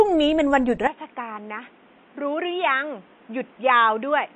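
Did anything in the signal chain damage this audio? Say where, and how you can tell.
Yes, two things. Right through the clip there's what sounds like MP3 compression at the codec stage. Nothing survives above 8.3 kHz, and the speech has that watery, swirly quality, with chirpy sibilants and smeared consonant attacks. That's the encoder starving for bits, chopping the treble at a fixed point and letting weak frequency lines flicker on and off between frames. The damage is plainly audible and fits a low bitrate around 32 kbps.

Then at 0.87 s the input likely switched to a poorer device, at the capture end. From there to the end of the clip the band closes down to nothing above 3.8 kHz, so the speech goes dull and boxy. The level drops by around 10 dB, and a fresh noise floor sits roughly 30 dB under the speech. There's no gap at the changeover. The sound just changes character in place, the way it does when a system hops to another mic or a headset's call profile.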